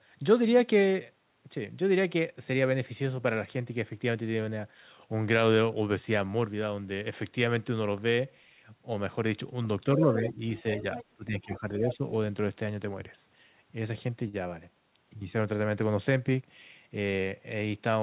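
Speech suppressed in double talk appears from 9.84 to 10.45 s. The talker's level sinks by up to about 10 dB across roughly 0.4 s. The likely cause is the echo canceller: faced with both sides at once, it turned everything down. The same dip returns from 11.16 to 12.02 s, affecting roughly 0.7 s.

Other side's voice leaking through comes in three scraps: 10.27 to 10.32 s, 10.57 to 11.05 s, and 11.90 to 11.96 s. A second, fainter voice sits under the talker, about 15 dB down in the first two and about 10 dB down in the last. It is likely loudspeaker echo the canceller left in the microphone signal.

A short stall from a late packet occurs at 14.28 to 14.35 s. A packet missed its slot, the jitter buffer ran dry, and the receiver stretched the last sound by 50 ms before carrying on from the same point. No audio is lost, but the sound is held too long and ends up 50 ms later. All of this sits within a narrowband call path with nothing above 4 kHz.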